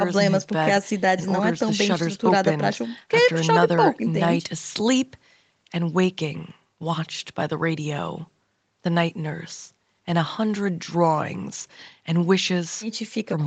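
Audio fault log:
No faults to log for this speech.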